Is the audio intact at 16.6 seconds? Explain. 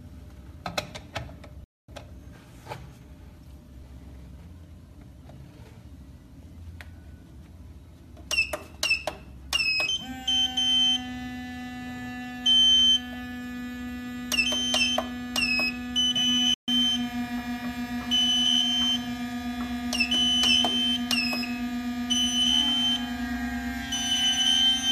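No, a playback stall runs from 16.54 to 16.68 s: the sound cuts to silence for 137 ms, likely because the player ran short of data or was blocked, then resumes.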